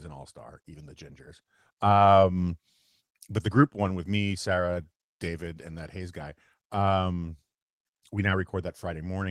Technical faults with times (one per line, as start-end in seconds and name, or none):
0.00-9.31 clock drift between sender and receiver
0.07-9.28 repeated timing corrections